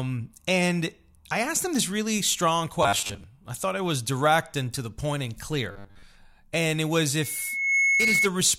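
From 2.83 to 3.24 s and again from 5.72 to 6.04 s, the speech turns into a rigid 100 Hz buzz, robotic sound from repeated short buffers, likely from late audio being patched with 10 ms repeats. About half and then most of each stretch is repeated. At 7.21 s a loudspeaker feedback squeal begins. A 2.2 kHz tone builds over roughly half a second to about 5 dB above the speech and holds until 8.29 s.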